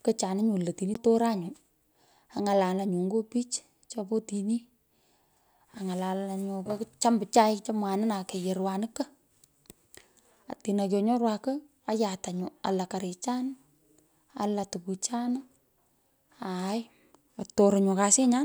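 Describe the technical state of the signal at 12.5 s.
At 12.5 s the speech is intact, with no dropout, clipping, glitch or other fault in the signal.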